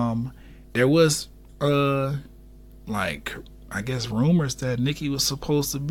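From start to finish the speech carries mains hum: a steady 50 Hz tone with low harmonics, sitting roughly 25 dB below the signal. Power-line current has coupled into the audio path, through a ground loop or a nearby transformer, producing a constant low drone.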